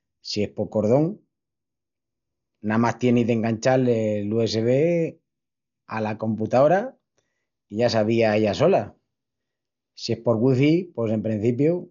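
Throughout, the speech sounds dull and boxed in, with nothing above about 6.9 kHz and a rough, fluttering hiss clinging to voiced sounds. This is likely heavy Dolby Digital compression at a starved bitrate, perhaps near 48 kbps, where missing detail gets filled with noise.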